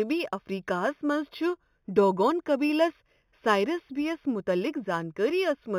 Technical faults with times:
0.00-5.78 imaging from linear upsampling

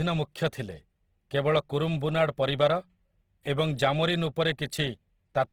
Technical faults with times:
0.00-5.52 Opus compression

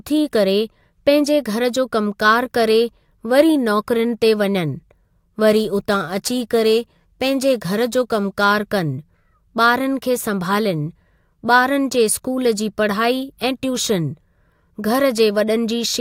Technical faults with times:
5.50-8.44 crude rate conversion

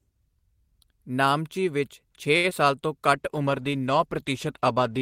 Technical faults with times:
2.37-2.46 short stall from a late packet
2.50-2.53 short concealed packet loss
3.14-5.01 call bitrate drop

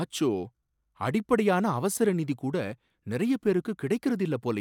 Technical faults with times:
none

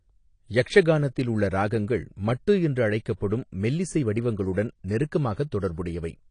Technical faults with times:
0.00-6.31 AAC compression

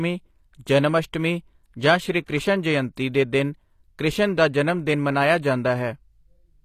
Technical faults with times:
0.00-6.65 HE-AAC compression
2.26-2.28 pre-echo

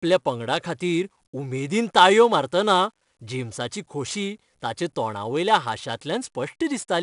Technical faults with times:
0.00-7.03 4-bit ADPCM compression

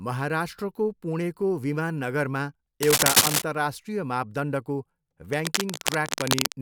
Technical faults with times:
2.83-3.42 cable scratch noise
5.31-6.52 cable scratch noise

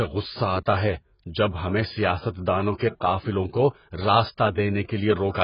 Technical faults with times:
0.00-5.44 AAC compression
2.77-2.80 pre-echo

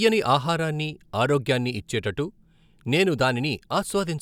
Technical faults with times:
none

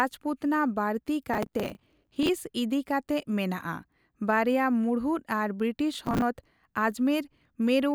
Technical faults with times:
1.34-2.29 processor overload crackle
5.94-6.22 processor overload crackle

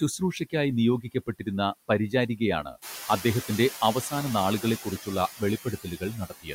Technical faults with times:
0.00-6.54 noise suppressor artifacts
1.02-1.47 speech cut by the noise suppressor
5.64-6.54 speech cut by the noise suppressor

